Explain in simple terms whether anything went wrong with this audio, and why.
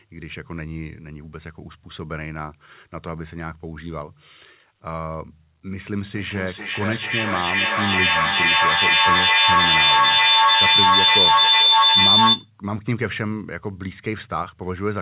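Something did go wrong. From 6.14 to 12.52 seconds there is a feedback howl. A microphone picks up a loudspeaker on the same call, and the sound loops back louder each time. It becomes a high whistle near 4 kHz, with the loop repeating roughly every 0.4 seconds.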